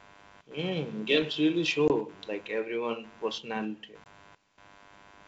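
A low buzz pulsing at around 100 Hz, roughly 25 dB below the speech, runs through the whole clip. This is computer activity noise: processor or peripheral load disturbing the audio circuit's shared ground.

From 1.88 to 1.91 s, just after "mm games really", the speech drops into a hard-edged 20 ms hole, then returns with brief distortion. This is packet loss on an ADPCM call. A single lost packet was filled with silence, and the decoder's predictor and step size drifted out of step with the sender's. The same gap and recovery happen again from 4.04 to 4.07 s, after "like everyone personality".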